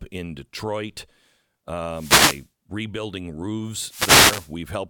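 A speech recording with two wireless microphone noise hits. The first runs from 1.89 to 2.49 s. The second runs from 3.78 to 4.58 s. Each is a short swish of static that rises over the voice and then clears. The radio link from an analogue FM microphone is fading. Reflected signals cancel the direct one, so receiver noise comes up. In the deeper part of a fade it breaks into clicks.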